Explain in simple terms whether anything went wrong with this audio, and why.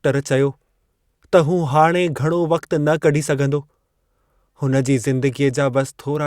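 Nothing went wrong here; the speech comes across steady and intact the whole way, with no glitches, dropouts or odd noises to point to.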